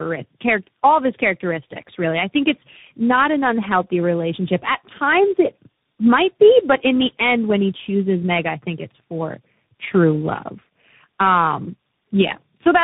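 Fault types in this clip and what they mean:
Tandem speech coding: the speech sounds like it passed through about three separate speech coders in series, each re-encoding the previous one's decoded output, so the damage compounds. The result is rough, muffled and warbly, with nothing above 3.8 kHz.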